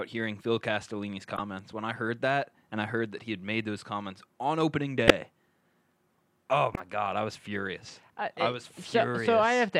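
Three short corrupt frame decoded glitches show up, at 1.31 to 1.40 s, at 5.08 to 5.11 s right after "those comments on opening", and at 6.74 to 6.80 s just before "god I was furious". Each time, a few damaged frames got played anyway, so energy lands at the wrong frequencies and you hear a quick chirpy burst. The middle one is the loudest.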